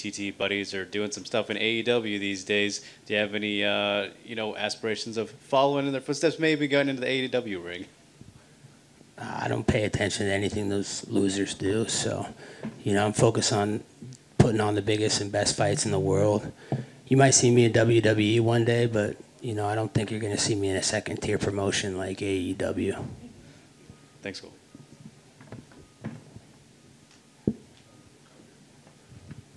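Nothing here trips any alarm, no dropouts, glitches or other technical faults turn up anywhere in the audio.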